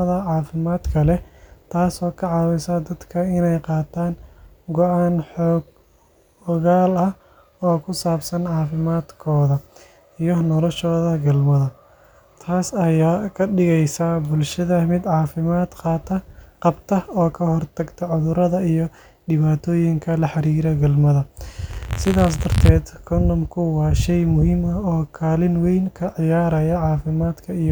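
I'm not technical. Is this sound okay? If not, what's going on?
No. Just after "dhibaatooyinka la xiriira galmada", from 21.69 to 22.69 s, there is buffer tearing. The playback software and the sound hardware slipped out of step, so each small chunk of audio (consistent with a 512-sample buffer) carries a tiny sliver from a moment earlier. The speech takes on a robotic buzz repeating 86 times a second.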